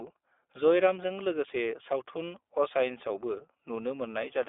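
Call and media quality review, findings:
iLBC codec, throughout. Narrowband: nothing below about 300 Hz or above 3.5 kHz, so the sound is thin and muffled. Speech is intelligible but plainly rough and synthetic, because the excitation is re-coded frame by frame with no carry-over. The frame rhythm fits 20 ms frames and the 15.2 kbps mode. Probable component: the narrowband VoIP leg of the call path.

Lost iLBC frames, 0.94 to 0.96 s, just before "लोगोसे सावथुन". A 20 ms gap, consistent with a single dropped packet. The decoder fills it by repeating the last pitch cycle blended with noise, which gives a brief held, buzzy vowel. Recovery is immediate because iLBC frames decode independently. Probable component: the network or jitter buffer.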